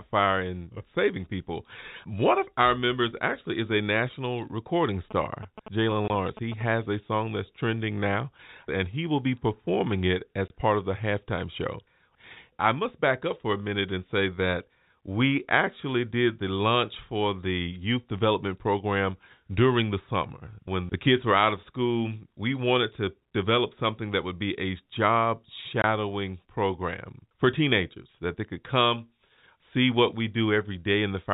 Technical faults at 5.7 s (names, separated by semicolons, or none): GSM signalling bursts